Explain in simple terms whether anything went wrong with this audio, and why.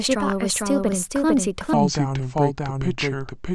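A doubled audio track runs through the whole recording. A second, full-strength copy of the speech trails the original by about half a second, so every sound is followed by a crisp, equally loud repeat. It doesn't fade or sound roomy like a natural echo. That points to the same audio being captured twice, likely once through a slower route or through an edit that left two copies out of step.

A section at the wrong speed starts at 1.73 s and runs to the end of the clip. From that point the audio plays at 0.715 times its proper speed, so everything becomes slower and deeper, dropping by roughly five semitones. Speed and pitch shift together at one moment. That is the sign of this part likely being played back on the wrong clock by an editor or player.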